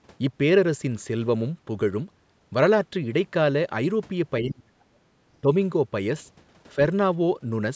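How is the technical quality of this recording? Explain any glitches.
The recording is call-processed speech with nothing above 8 kHz, but it has two gain drops. From 4.41 to 5.06 s the speech sinks by about 35 dB, and from 5.41 to 5.47 s it dips by about 10 dB. These dips are likely speech suppressed in double talk: the echo canceller mistook near-end speech for loudspeaker echo and attenuated it.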